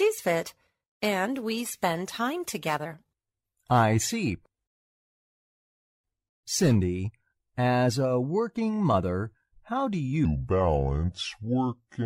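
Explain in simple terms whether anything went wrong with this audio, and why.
From 10.25 s to the end there's a section at the wrong speed: everything plays at about 0.74 times speed, dropping roughly five semitones deeper and slower, likely from a wrong playback clock.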